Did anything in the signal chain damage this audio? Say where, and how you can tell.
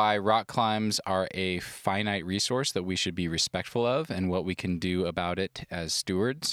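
No, nothing along the signal chain has audibly damaged this speech recording, and there is no sign of any stage leaving its mark on the signal.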